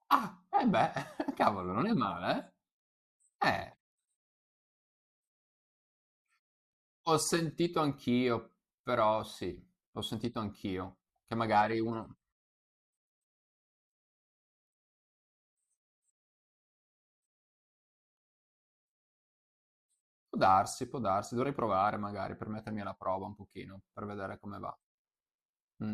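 No technical faults can be heard anywhere in the recording; the signal stays steady and intact throughout.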